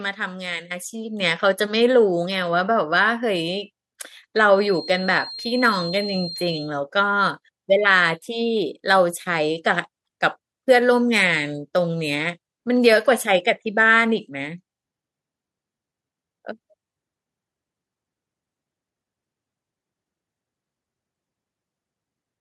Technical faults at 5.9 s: feedback whistle

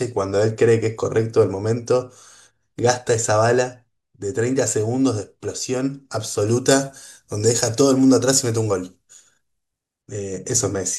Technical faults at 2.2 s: none

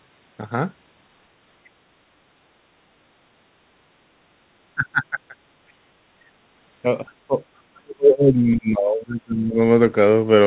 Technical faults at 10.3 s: none

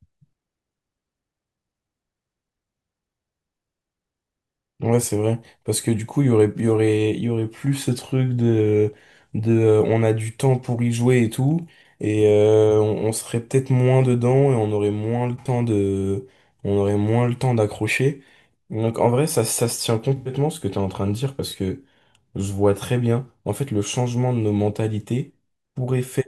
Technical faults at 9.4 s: none

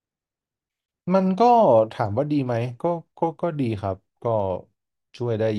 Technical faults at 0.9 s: gap at a join of encoded pieces

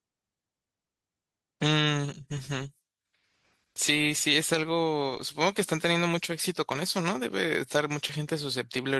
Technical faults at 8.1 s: short concealed packet loss

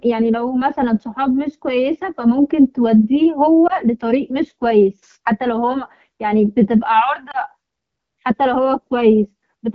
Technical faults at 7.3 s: lost AMR speech frames

